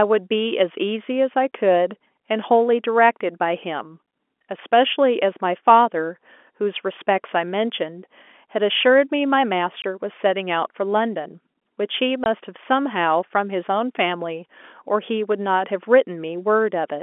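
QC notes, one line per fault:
9.82–9.84 s and 12.24–12.26 s, packet loss filled with silence: two 20 ms holes where single packets dropped and were filled with silence, leaving hard-edged gaps.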